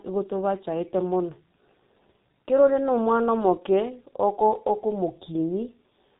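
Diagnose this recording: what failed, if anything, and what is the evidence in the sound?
The codec stage failed: the speech passed through heavy G.723.1 coding, which fits a bitrate around 6 kbit/s. Nothing above 4 kHz survives, so the speech is muffled. The slowly updated voice model across 30 ms frames leaves the sound hoarse and the consonants smeared throughout.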